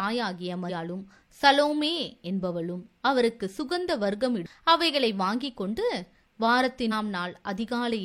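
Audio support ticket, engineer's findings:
Short glitches on the speech at 0.65 to 0.71 s, 4.42 to 4.47 s and 6.88 to 6.93 s, each about 50 ms. Damaged data in a compressed stream. Probable component: the compressed file or the delivery path feeding the decoder. Mechanism: corrupted bytes make the decoder misread frames and lose sync, so it emits garbage until it finds the next valid frame header.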